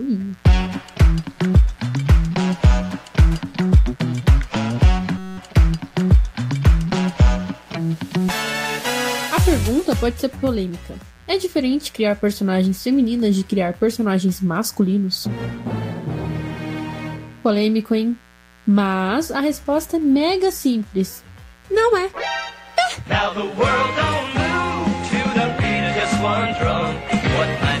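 Mains buzz runs through the whole clip, a steady, raspy buzz sitting roughly 30 dB below the wanted sound. It comes from sharp switching spikes, of the sort a dimmer or rectifier produces, or from a gap in shielding, entering the signal twice in every 60 Hz mains cycle. Because those spikes are so abrupt, they carry a dense series of 60 Hz harmonics reaching up into the kilohertz range, which gives the hum its rough, edgy texture rather than a smooth tone.

A system hang loop occurs from 5.18 to 5.38 s. The computer or its audio driver stalled while the sound hardware kept cycling through its ring buffer, replaying one 5.33 ms fragment of audio exactly, which fits a 256-sample buffer. Repeating at 188 Hz, that tiny slice fuses into a steady, pitched buzz for about a fifth of a second instead of a stutter. When the system recovers, the sound picks up again with practically nothing missing.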